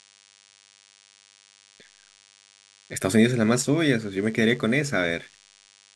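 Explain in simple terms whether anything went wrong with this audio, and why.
A DECT cordless phone buzz runs under the speech for the entire clip, from the first moment to the last. A cordless phone or its base station sitting near the recording gear sends out a short radio pulse 100 times a second. The audio circuitry picks up those pulses and turns them into sound, producing a thin, steady buzz with a harsh edge. It stays quiet, well below the speech, but it never lets up.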